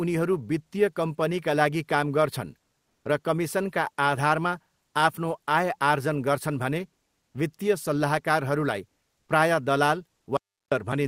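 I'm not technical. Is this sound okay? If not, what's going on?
No. From 2.88 to 3.05 s, the natural room sound in a short pause becomes a flat, featureless hiss at almost the same loudness. That is comfort noise in place of the background, likely because the sending end stopped transmitting during the silence and the receiver filled it with fake noise.

From 10.37 to 10.72 s, the sound cuts out completely for about a third of a second, with no room sound at all. This is an audio dropout to silence, likely from the input briefly disconnecting while recording continued, so that moment is lost.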